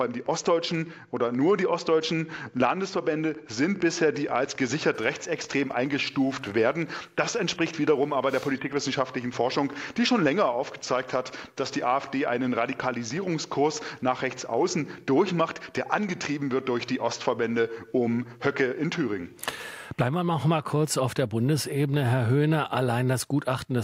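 A train of clicks runs from 0.04 s to 13.33 s: around seventy similar pulses, close to five per second at an uneven pace, peaking roughly level with the sound itself. They tick over everything, pauses included, likely from electrical interference or a faulty connection or power supply.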